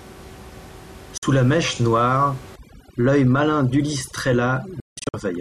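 At 1.18 s, just before "la mèche noire", a digital broadcast dropout mutes the sound for about 48 ms with a 3 ms fade, which fits two failed frames. From 2.56 s, after "la mèche noire", to the end, overdone noise removal strips the room noise, about 20 dB below the speech, down to twinkling specks. Between 4.80 and 5.14 s, a second dropout cuts 264 ms in several short holes, the longest 168 ms.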